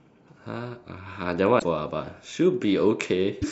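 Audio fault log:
1.56–1.64 s and 3.38–3.44 s, damaged data in a compressed stream: corrupted bytes make the decoder misread frames and lose sync until it finds the next header, giving brief disruptions of 84 ms and 56 ms.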